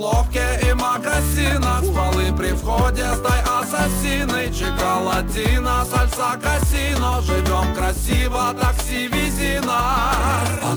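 From start to finish the audio carries a crude rate conversion: samples were repeated rather than filtered, in a pattern that fits a step from 32 kHz up to 48 kHz. The repeating pattern produces inharmonic tones about 20 dB below the signal, heard as a gritty fizz that tracks loud and bright passages. Unlike codec artefacts, it doesn't swirl or smear; it stays fixed to the signal level, with no dropouts.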